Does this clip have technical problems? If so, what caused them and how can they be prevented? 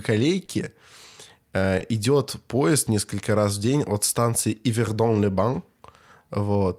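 Yes, there are three related problems here.

The root cause is clock drift between sender and receiver. The sender's audio clock runs about two percent slow compared with the receiver's, so samples arrive a little slower than they're played out. The jitter buffer keeps draining, and the receiver has to patch the gap by stretching or repeating bits of the speech. That's why you get small timing hiccups throughout the clip instead of a clean, even flow. To prevent it, have the receiver estimate the sender's clock rate and resample continuously, rather than relying on occasional buffer rescues.

Two short stalls from late packets show up as well. The first runs from 0.45 to 0.50 s, with about 30 ms of sound held over. The second runs from 1.78 to 1.82 s, with about 20 ms held. In both cases the buffer ran dry, so the receiver held the last sound until data turned up, then carried on from the same spot. 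Nothing is lost, but the speech hangs for a beat with a slight smear. A slightly deeper or adaptive jitter buffer would ride out these gaps without an audible hold.

From 2.59 s to 6.54 s the receiver makes repeated timing corrections. It effectively plays that stretch at 97% speed, adding around a tenth of a second of material through many tiny edits, all in the same direction but spaced unevenly. Individually they're small. Proper drift compensation through smooth resampling would replace these piecemeal edits with an inaudible, continuous adjustment.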